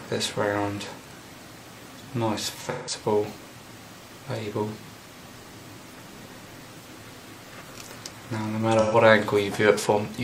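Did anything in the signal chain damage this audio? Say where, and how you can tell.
Yes, at the codec stage: AAC frame loss with concealment at 2.70–2.94 s and 8.80–8.96 s. The decoder rebuilt missing frames from the last good spectrum, so each gap sounds smeared and noisy rather than silent; the lengths fit four and three lost frames. A plain dropout would cut to silence or click.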